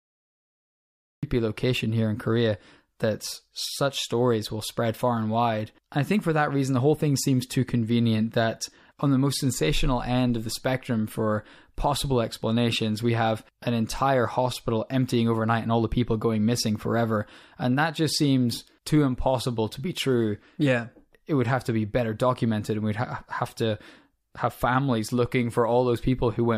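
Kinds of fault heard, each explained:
Cut-off start: The capture kicked in late, so the first 1.23 s is flat digital silence and then the speech just appears mid-sound at 1.23 s, right on "location here in", with no natural attack or lead-in. Whatever was being said before that point never made it into the file, so the opening sounds clipped off rather than starting from a breath or a pause. That's the telltale sign of a recording or stream that began a beat too late.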